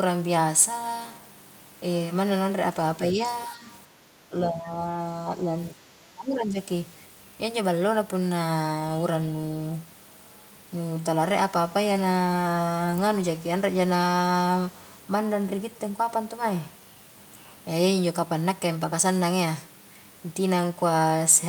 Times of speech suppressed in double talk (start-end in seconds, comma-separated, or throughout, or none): 3.12-3.19, 3.49-3.67, 4.29-4.77, 5.71-6.59